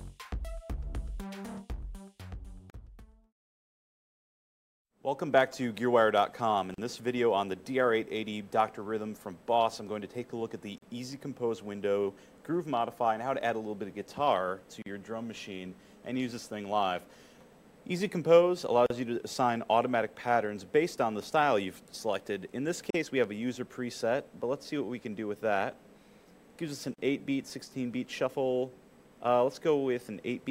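Seven short dropouts, each a gap at a join of encoded pieces, interrupt the audio at 2.70, 6.74, 10.78, 14.82, 18.86, 22.90 and 26.94 s, one every 4.0 s and each about 40 ms long. The audio appears to have been encoded in separate pieces and butted together, leaving each run's start-up delay and final-frame padding in place. On a waveform each shows as a brief notch with smeared edges; a spectrogram shows a thin vertical gap across all frequencies.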